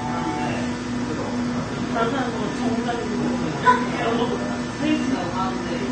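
From start to finish the sound is dull and smeared, with a fizzy, warbling texture and nothing above 9 kHz. This is likely AAC compression at a low bitrate, around 32 kbps. A spectrogram shows a hard ceiling at 9 kHz.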